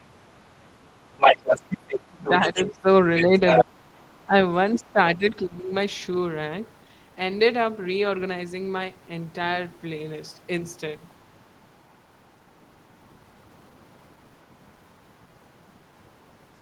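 A second voice runs underneath the speech from 1.17 to 3.64 s, somewhat louder than the talker, and returns much more faintly, about 15 dB down, from 4.74 to 5.29 s. This is the other side's voice leaking through, likely because the talker's loudspeaker output reached the microphone and the echo canceller left a residue. On a spectrogram it shows as a second set of harmonic striations overlapping the talker's own. From 1.37 to 5.72 s the talker's level sags in patches totalling about two seconds, with the deepest dips around 20 dB. This is speech suppressed in double talk, likely the canceller turning everything down while both sides spoke at once. The waveform shows chunks of the envelope abruptly hollowed out, and the spectrogram shows the talker's upper bands thinning or going dark in those patches.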